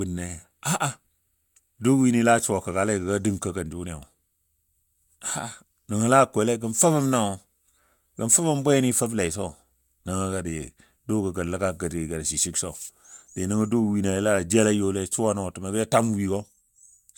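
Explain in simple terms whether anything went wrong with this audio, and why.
Nothing went wrong with this speech recording. There is no moment where a fault can be heard, so there is nothing to explain or fix.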